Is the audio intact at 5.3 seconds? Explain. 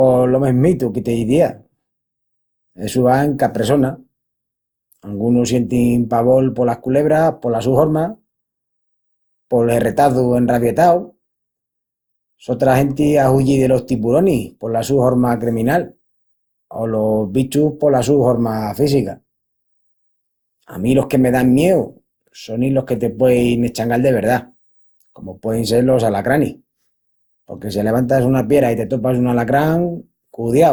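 No. At 5.3 seconds, as throughout the clip, the speech sounds swirly and hollow, with a smeared, watery texture and softened consonant attacks, more degraded than a single lossy encode would leave. This is generation loss, likely from the audio being decoded and re-encoded about four times, in a way that fits Opus at 64 kbit/s. Each pass quantises again on a shifted frame grid, so noise builds up.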